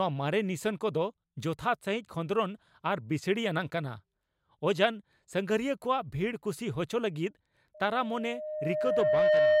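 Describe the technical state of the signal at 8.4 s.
At 8.4 s the signal is caught in a loudspeaker feedback squeal that begins at 7.74 s and runs to the end of the clip. The microphone is picking up the loudspeaker it feeds, and at 612 Hz the loop gain exceeds one, so that tone feeds itself. Unlike a steady interfering tone or hum, it swells from nothing over about a second and a half and settles roughly 10 dB above the speech.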